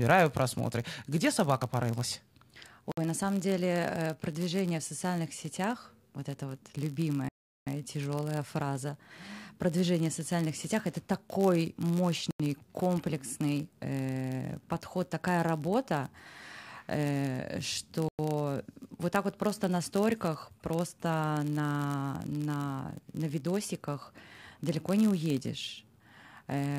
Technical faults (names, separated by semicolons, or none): block size mismatch (padded); Bluetooth stall